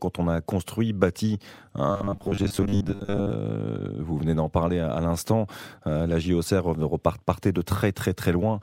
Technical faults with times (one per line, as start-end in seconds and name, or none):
1.91-3.30 robotic sound from repeated short buffers